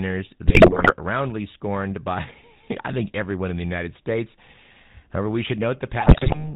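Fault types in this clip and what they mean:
GSM full-rate codec: The whole recording carries the sound of the original GSM speech codec, which fits a 13 kbps full-rate stream. The coder rebuilds speech from a vocal-tract filter fed by a sparse, regularly spaced pulse excitation, so the voice has a plainly audible buzzy, gravelly texture. Nothing survives above 4 kHz, which removes sibilance and air and leaves a narrow, telephone-like band.
GSM bit errors: Two bursts of corrupted frames hit the decoder, from 0.46 to 0.92 s at about a 6.7% bit error rate and from 6.00 to 6.49 s at about 7.8%. Flipped bits land in the filter, pitch and gain parameters, so individual frames get distorted spectra or sudden level jumps. The speech breaks into squawks, pops and gargling for roughly half a second each time.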